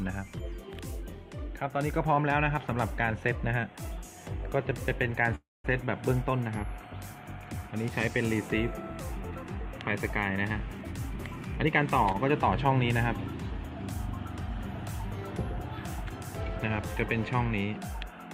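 From 5.35 to 5.66 s the sound stops, trails off into about 210 ms of silence, then resumes where it left off, 288 ms late with nothing lost. This is a call audio freeze, likely from delayed packets draining the jitter buffer.

Between 11.64 and 11.81 s the audio runs hurried, at 120% speed with unchanged pitch. This is a jitter buffer speed-up: the receiver had excess buffered audio and trimmed roughly 40 ms of pitch-period slices to shrink the delay.

At 12.12 to 12.16 s a sound is held slightly too long, adding 21 ms before playback continues intact. This is a short stall from a late packet: the jitter buffer briefly ran empty, so the last sound was stretched.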